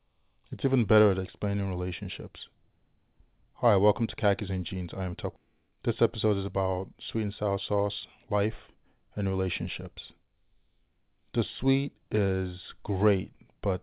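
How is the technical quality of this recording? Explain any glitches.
The recording has two timing glitches close together, both from the path of a call. The audio is also band-limited to telephone bandwidth, with nothing above 4 kHz, which fits a G.711 mu-law call codec.

At 5.36 to 5.38 s, just after "I am", there is a skip ahead. About a second of audio was discarded in transit or by the jitter buffer while later audio was already queued, and playback jumped straight to that later material. The two edges meet with no silence in between. That seamless join distinguishes it from a dropout, where the missing stretch is replaced by a gap or filler.

From 5.46 to 6.67 s, leading into "sweet and sour sauce", there is a jitter buffer speed-up. The buffer was holding more audio than its target, so the receiver repeatedly cut out tiny pitch-period-sized slices, about a tenth of a second in total. 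This made the speech run about 7 % fast and sound slightly hurried. The pitch stays unchanged, which distinguishes it from simple resampling or a playback-rate error, where faster speech would also sound higher.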